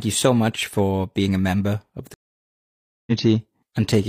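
Speech here, with a stream reconnect: it drops to silence from 2.14 to 3.12 s, about 0.93 s, then a fresh decoder picks up roughly 0.7 s further along.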